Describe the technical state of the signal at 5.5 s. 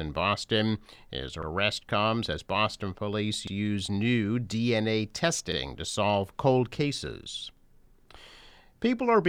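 At 5.52 to 5.57 s there is an overlapping chunks fault. A 2.0 s processing block begins before the previous one finished, so about 48 ms of sound plays twice and produces a brief stutter-click. On the waveform, that 48 ms segment appears twice in a row with a discontinuity at the join. The spectrogram shows a thin vertical broadband line there, followed by a repeated copy of the preceding pattern.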